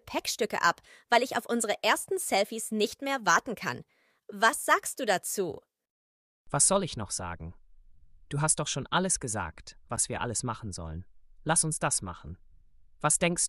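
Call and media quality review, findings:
Block of digital silence at 9.96 s, about 10 ms long: a sharp tick. Waveform drops flat with no fade; spectrogram shows a thin empty gap bracketed by broadband vertical lines. Probable playback path, output buffer not filled in time.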